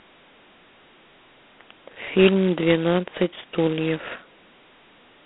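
From start to finish the speech carries heavy G.726 ADPCM damage, with a harsh, rasping hiss riding on every syllable and swelling with the level, which fits the coarse 16 kbit/s mode. The band sits roughly 200 Hz to 3.4 kHz, with nothing above 3.9 kHz.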